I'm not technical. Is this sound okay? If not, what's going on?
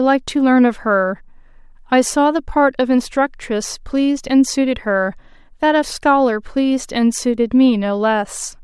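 Yes, this recording sounds fine. Nothing in it points to a technical problem.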